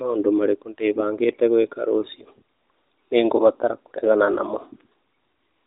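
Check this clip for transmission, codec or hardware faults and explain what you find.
Nothing to flag here: I had a good listen to this speech clip and didn't hear any faults.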